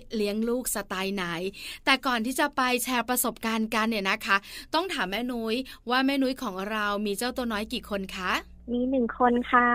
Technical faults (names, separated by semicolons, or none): mains hum